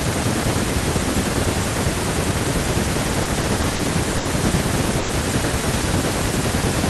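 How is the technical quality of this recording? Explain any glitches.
The speech has three delivery glitches, all packet-timing stalls with nothing actually lost. The call path's high-frequency cutoff near 12 kHz shows as a ceiling in the spectrum.

Repeated stalls (stutter), 3.23 to 3.81 s: packets arrived late again and again, so the jitter buffer ran dry four times. The receiver stretched the last sound through roughly 100 ms of gaps, the longest 40 ms. The speech drags and stutters. A spectrogram shows short smeared, horizontally frozen patches.

Short stall from a late packet, 4.17 to 4.27 s: one packet missed its slot, and the receiver held the preceding sound for 80 ms until it arrived, then resumed in place. You hear a sound drawn out with a slight buzz or dip. On a spectrogram this appears as a flat, repeated band.

Call audio freeze, 4.99 to 5.11 s: the audio stops progressing for 100 ms, filled with a continued buzz or hiss that fades but never reaches silence, then picks up where it stopped. 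The likely cause is packets held up in transit. The waveform shows a decaying, periodic stretch there.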